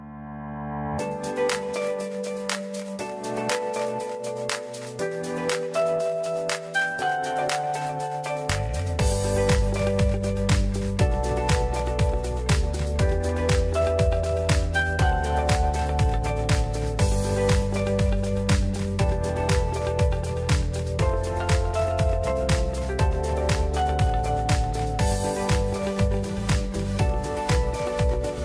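Nothing stood out on listening to the audio.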